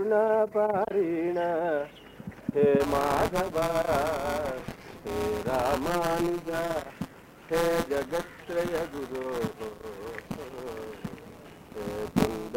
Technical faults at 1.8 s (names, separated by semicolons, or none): none